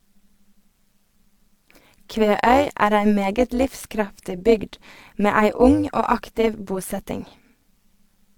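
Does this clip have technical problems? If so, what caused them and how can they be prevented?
Yes. Overlap-add ripple runs through the whole speech clip: the frames were rejoined with an overlap whose windows don't sum to a constant, so the level dips by about 11 dB once per frame, around 200 times a second, giving a metallic buzz with extra tones. Preventing it means using a window and hop size that satisfy the constant-overlap-add condition.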